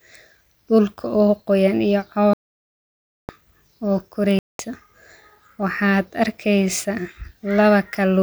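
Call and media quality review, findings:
Speech cuts to silence 2.33–3.29 s, right after "dulka o qooyan iyo"; about 0.95 s missing, speech resumes further on as if it had kept playing. Likely Bluetooth dropout: late packets discarded at headphones, output muted until stream recovered.

Second gap 4.39–4.59 s, about 0.2 s, same mute and skipped-ahead resumption. Likely Bluetooth dropout again, shorter burst of lost packets on the wireless link.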